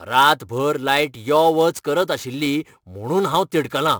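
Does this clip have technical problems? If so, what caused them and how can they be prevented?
Yes. Sample clock jitter runs throughout the speech: an unstable converter clock shifts sampling instants by roughly 10 µs, adding a hiss about 20 dB below the signal that swells on loud, bright passages and disappears in pauses. Prevention: clock the converter from a low-jitter, stable reference.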